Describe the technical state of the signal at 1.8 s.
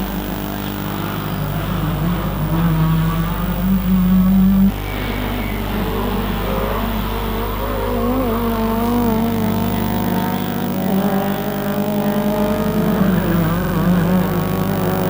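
At 1.8 s the signal is intact, with no audible fault at that moment.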